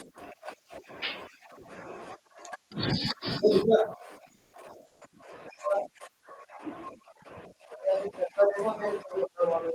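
A speech recording carried over a call path whose audio reaches up to about 12 kHz. From 4.35 to 4.53 s, comfort noise replaces the background for 180 ms. The real background, about 45 dB below the loudest parts, becomes a flat, featureless hiss about 1 dB different in level. The sender likely stopped transmitting during the pause and the receiver filled it with synthetic noise. From 4.87 to 5.01 s, sound dropped by the voice detector leaves 140 ms of steady noise. About 90 ms of real sound is lost. The detector likely mistook the quiet sound for background and cut transmission until it triggered again.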